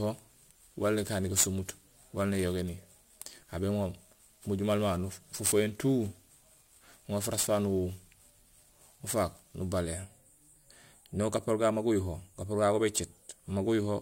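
From the start to 9.81 s, the speech carries sample clock jitter. The converter's clock wanders, so each sample lands a little early or late. Here the timing error is around 10 microseconds. That is large. A misplaced sample matters most where the waveform changes fast. So the error follows the speech, sitting roughly 15 dB below it. It sounds like a rough hiss riding on loud and bright sounds. It drops away in the pauses.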